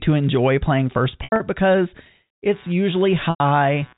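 At 1.24 to 1.40 s the speech hits packet loss with pitch repetition. About 120 ms of audio goes missing, scattered over 160 ms with the longest gap 80 ms, which fits roughly six 20 ms packets. The receiver fills each gap by looping the last pitch period. The shorter holes come out as a brief buzzy hold, while the 80 ms run outlasts the roughly 50 ms fade and dips toward silence before speech cross-fades back. A buzzy repeated cycle, rather than a plain dropout or click, gives it away.

From 2.50 s to the end, computer activity noise enters. Load changes in the machine disturb the shared ground of the audio circuit, leaving a buzzy pulsing at around 150 Hz, roughly 30 dB under the signal. Unlike mains hum, it tracks the computer's activity, not the speech.

At 3.30 to 3.40 s, under that buzz, a second packet loss with pitch repetition removes 100 ms, which points to about five packets. The repeated period fades toward silence before the audio resumes. 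The G.711 telephone band limit at 4 kHz is audible throughout.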